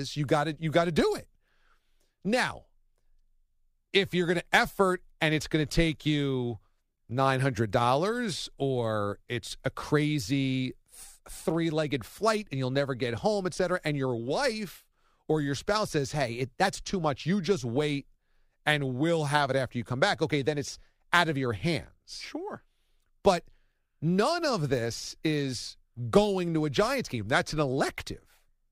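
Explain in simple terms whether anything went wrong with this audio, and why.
Two brief drift correction steps are the likely cause of what goes wrong here. Software keeping two clocks in sync suddenly changed the playback rate to refill or drain its buffer. From 16.15 to 16.67 s, between "or your spouse says" and "too much", the speech runs about 6% fast and jumps up roughly a semitone before snapping back. From 27.18 to 27.72 s it does the opposite, about 6% slow and roughly a semitone lower.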